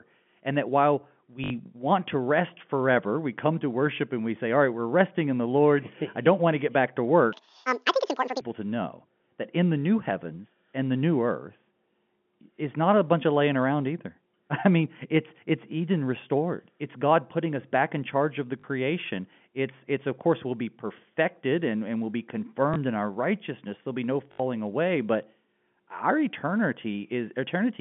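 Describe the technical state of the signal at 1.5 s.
At 1.5 s, packet loss with the last packet repeated ends a 60 ms gap from 1.44 s, between "that while" and "want to rest forever". Repeated packets give a robotic stutter buzzing near 50 Hz.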